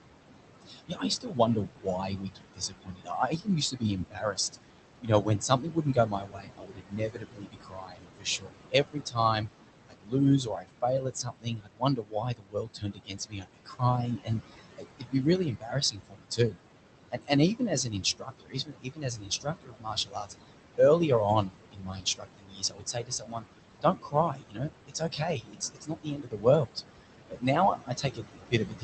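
Throughout the speech, noise suppressor artifacts are present. The room noise, sitting only about 9 dB below the voice, is pulled down by about 21 dB in the gaps and swells back under each phrase. This band-by-band, frame-by-frame cut sets it apart from a plain gate's clean on-off switching.

Speech cut by the noise suppressor follows at 0.61–4.65 s, 5.01–9.49 s, 9.86–16.63 s, 17.11–20.32 s, 21.43–23.46 s, 23.82–26.77 s and 27.3 s to the end. Quiet consonants and word endings are mistaken for noise and dropped by about 20 to 22 dB, so roughly 1.5 to 4 seconds in each of the first six stretches sound swallowed. That shows it is lost speech, not dropouts or clipping.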